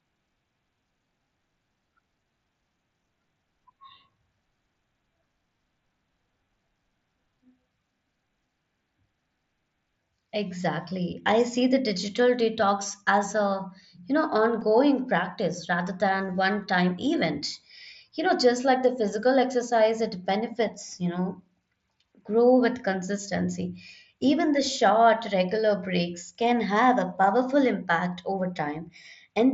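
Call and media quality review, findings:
Concealed Bluetooth headset packet loss at 14.61 s, between "as a you know" and "practice rather than": one brief, near-inaudible patch where roughly 7.5 ms of audio went missing, consistent with a single dropped mSBC frame. The receiver filled the gap by repeating a best-matching recent stretch of waveform. The wideband mSBC link adds light graininess on loud sounds.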